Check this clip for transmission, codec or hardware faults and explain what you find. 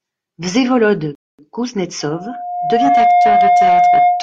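Two faults are audible in this speech clip: a playback stall and a feedback squeal.

Rebuffering stall, 1.15 to 1.39 s. The player exhausted its downloaded audio and paused until more data arrived. The speech drops abruptly to silence, then picks up exactly where it broke off, with nothing skipped. The gap adds about 236 ms to the running time, so the fault stretches the timeline rather than removing any of the sound.

Loudspeaker feedback squeal, from 2.01 s to the end. A microphone is picking up the loudspeaker it feeds, and at 712 Hz the round-trip gain exceeds unity. Each pass through the loop makes that frequency stronger. A single steady tone at 712 Hz emerges and swells over roughly a second until it sits around 5 dB above the speech, and it is still sounding when the clip ends.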